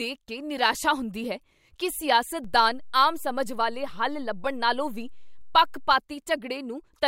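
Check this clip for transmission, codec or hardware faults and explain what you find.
One hardware fault: a DC step from 2.44 to 5.93 s, just after "ਨਿਰਾਸ਼ਾ ਹੁੰਦੀ ਹੈ ਕੀ". The waveform's zero line jumps by about −35 dBFS, then returns, giving a low thump at each edge. Unlike a dropout, the speech continues unbroken throughout.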